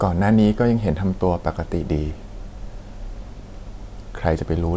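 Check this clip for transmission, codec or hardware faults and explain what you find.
No transmission, codec or hardware faults.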